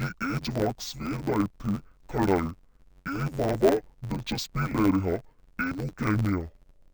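Speech, running throughout with interleaved audio read as planar: each 10.88 ms block of alternating left and right samples is split into halves played as separate channels, so the sound is dull and robotic, with a buzz at the 91.9 Hz block rate and no clear octave drop.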